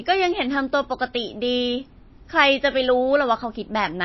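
MP3 compression is the likely cause of the plainly audible damage throughout this speech clip. Nothing sounds above 5.8 kHz, and weak frequency components drop in and out between frames, giving a watery, swirling texture that fits a starved bitrate around 24 kbps.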